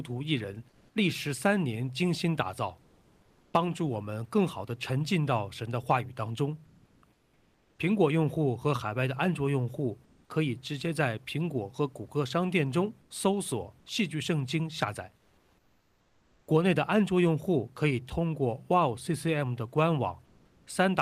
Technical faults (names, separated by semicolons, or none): comfort noise in place of the background